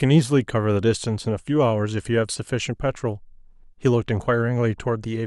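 Listening to the speech recording, nothing stood out as a technical problem at any point.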